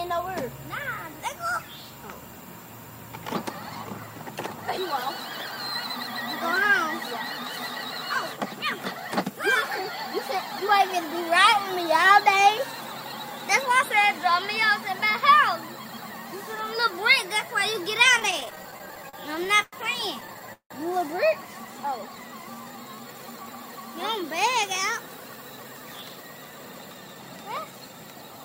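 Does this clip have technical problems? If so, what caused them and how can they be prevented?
Yes. Repeated stalls (stutter) occur from 18.19 to 19.74 s and from 20.20 to 20.72 s. Packets arrived late and the jitter buffer ran dry. The receiver stretched the last sound to fill about 311 ms, then 219 ms, with one gap of 173 ms. A steadier network path or a deeper jitter buffer would prevent this.

A jitter buffer slow-down runs from 21.61 to 23.44 s. The buffer was low, so the receiver repeated single pitch periods to build a reserve. The audio plays at 88% speed, adding 235 ms, at unchanged pitch. Fewer late packets would make this refilling unnecessary.

A jitter buffer speed-up runs from 25.14 to 28.45 s. The buffer held more audio than it aims for. The receiver cut short pitch-period pieces, about 0.4 s in total, so the audio plays at 111% speed and sounds hurried. Even packet delivery would avoid this catch-up.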